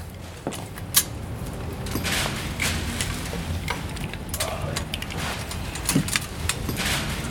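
No technical faults are audible anywhere in the recording.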